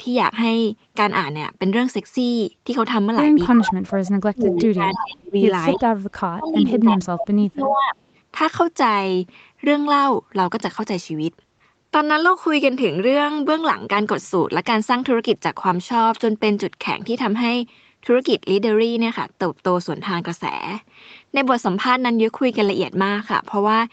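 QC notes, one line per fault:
3.54–5.36 s and 5.76–7.95 s, speech suppressed in double talk: with both sides talking at once, the echo canceller likely could not tell the near talker from loudspeaker echo and turned everything down. The voice sinks by as much as about 30 dB for roughly one and a half seconds in the first stretch and about two seconds in the second.
3.67–3.72 s, 4.45–5.06 s, 5.74–5.78 s and 6.45–6.58 s, echo leak: the far side's loudspeaker sound likely got past its echo canceller and was sent back, arriving 313 ms late. It comes through as a delayed copy, in short scraps plus one longer stretch around 4.5 to 5 s. The first scrap sits only about 5 dB under the speech. Later ones fall away to about 20 dB down and are fainter.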